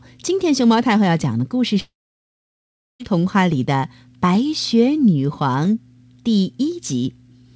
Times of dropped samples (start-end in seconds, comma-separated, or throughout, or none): 1.24, 3.52